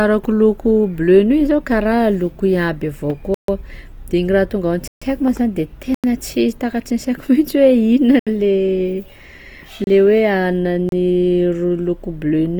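Throughout the speech, a lossy encoder starved of bits, likely Opus compression in its music mode at a rate near 24 kbps, leaves the audio grainy and rough, though content reaches up to about 20.2 kHz. Then come blocks of digital silence, where zeros replace the audio. Each cuts the sound to dead silence: at 3.34 s for 139 ms, at 4.88 s just after "raha tonga ao" for 139 ms, at 5.94 s for 93 ms (which fits a 4096-sample block), at 8.19 s for 72 ms, at 9.84 s for 29 ms and at 10.89 s for 31 ms.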